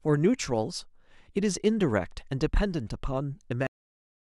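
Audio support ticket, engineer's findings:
Speech stops dead at 3.67 s, mid-sound, then flat digital silence with no decay to the end of the clip. Cut-off end: final buffers never written or flushed to output, so the tail was lost before playback/recording finalised. Check capture stop and flush handling.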